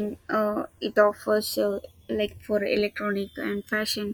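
A slow flanging sweeps through the speech throughout, where the channels were summed to mono. This is the channels drifting apart: separate device clocks, off by around 150 parts per million, let the delay creep toward about 0.7 milliseconds, sliding comb notches across the spectrum.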